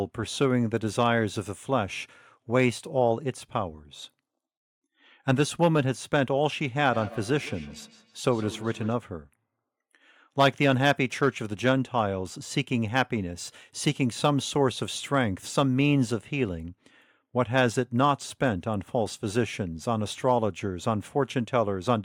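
From 6.79 to 9.0 s there's feedback echo between two devices: a second device in the room replays the call, and the first microphone picks it up again, outside its canceller's reach. The speech comes back roughly every 150 ms, peaking about 18 dB below the voice.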